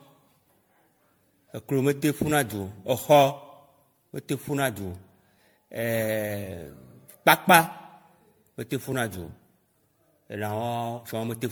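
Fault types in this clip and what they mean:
Generation loss: the speech sounds swirly, hollow and smeared, with softened attacks. The likely cause is about ten MP3 re-encodes at what fits 96 kbit/s, each requantising on a shifted frame grid. A spectrogram shows accumulated holes and speckle below a ceiling near 19.9 kHz.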